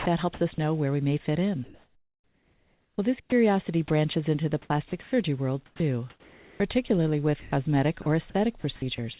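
From 0.00 to 0.58 s the speech is chopped by the voice detector, likely because the sender's detector flipped between sending and muting several times. About 160 ms of quiet syllable edges gives way to brief synthetic fill, so the sound stutters. Unlike a single dropout, the gating repeats within one short stretch.

From 1.64 to 3.32 s comfort noise replaces the background, likely from discontinuous transmission during a pause. For about 1.46 s the real room tone, with its small movements, turns into a steady, featureless hiss with nothing in it that changes.

Near the end of that pause, from 3.20 to 3.32 s, sound is dropped by the voice detector, likely because it mistook quiet speech for background. About 70 ms of speech is missing, covered by 120 ms of flat noise, before sending resumes. A second, tiny drop at 3.88–3.90 s swallows about 10 ms the same way. Each drop is a single gap rather than repeated flickering.

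The chopping returns from 4.62 to 5.12 s, with about 220 ms replaced, likely from the same switching. It comes back again from 5.66 s to the end, where about 1.04 s in total is swapped for fill. Throughout, the G.711 call path keeps everything below 4 kHz.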